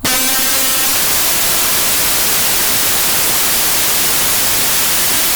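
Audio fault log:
Throughout: samples built from the wrong bytes. The music turns into loud, harsh noise, close to white on loud passages, because each sample's bytes are joined in the wrong order or alignment, so the rapidly changing low-order bits land in the high-order position and dominate every value. On a waveform the trace fills with dense, jagged noise. On a spectrogram energy spreads broadly across frequencies.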